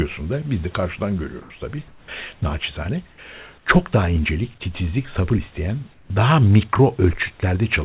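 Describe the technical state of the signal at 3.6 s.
Around 3.58 to 3.66 s, about 80 ms of the room background turns into a flat, featureless hiss, about 4 dB quieter. That's likely comfort noise in place of the background: the sender stopped transmitting in the pause and the receiver filled the gap with synthetic noise.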